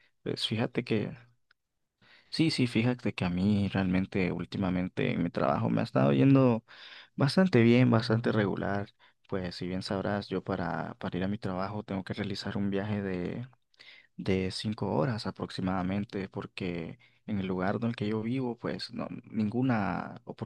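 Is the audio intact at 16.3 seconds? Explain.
Yes, the speech at 16.3 seconds plays through cleanly with no audible fault at that moment.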